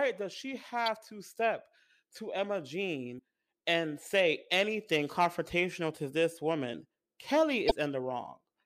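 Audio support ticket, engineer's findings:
Damaged data in compressed speech stream, three events. Corrupt frames reach the decoder; it misreads them, loses sync, hunts for the next header. Short chirp, squawk, click or hole: 0.86–0.88 s between "does she" and "to step to"; 3.15–3.19 s just before "and say anything confrontational"; 7.67–7.72 s. Probable component: file storage or transport.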